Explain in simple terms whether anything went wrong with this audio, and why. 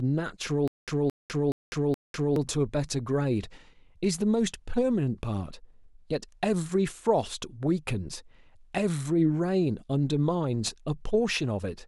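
The playback or stream likely stalled briefly from 0.68 to 2.36 s, and each time it tried to recover it replayed its last stored scrap of speech before running dry again. The result is a stutter with silent gaps: the same fragment of about 0.22 s plays 4 times, each followed by about 0.2 s of dead silence, repeating every 0.42 s or so. Whatever speech belonged in that stretch never plays.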